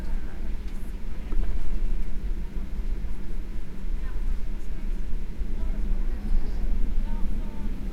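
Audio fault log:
Nothing stood out on listening to these sounds.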